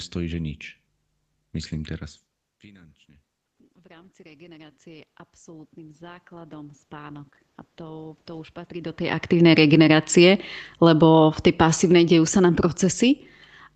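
Mains hum runs through the whole recording: power-line interference, likely from a ground loop or nearby transformer, couples into the signal at 50 Hz. It is a steady low tone with some low harmonics, sitting around 30 dB below the speech.

From 2.63 to 9.02 s the automatic gain rises. After the talker moves back from the microphone around 2 s, the input drops by about 24 dB, and the gain control slowly adds about 17 dB. The speech and the room noise swell together over several seconds.

From 9.3 to 13.31 s the automatic gain falls. Once the talker comes closer again, near 8.5 s, the input is too hot, and the control pulls its gain down by about 8 dB. The speech starts loud and then sinks gradually, with the background dropping along with it.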